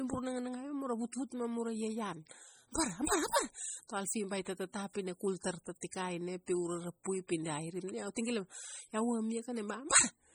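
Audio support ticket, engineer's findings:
MP3 compression, throughout. Heavy codec damage across the speech: watery, swirling texture, weak detail flickering between frames, smeared consonant attacks. Likely cause: a low-bitrate MP3 encode, which fits roughly 32 kbps. Nothing above about 21 kHz. Starved bit allocation is zeroing quiet spectral lines frame to frame.

Pre-echo, at 5.81 s, 6.46 s and 8.15 s. A short hiss of about 17 to 18 ms just ahead of sharp attacks, which then sound softened. Mechanism: the transform spreads quantisation noise over the whole block, so noise sized for the attack spills into the quiet gap before it. The same codec as above is the probable source.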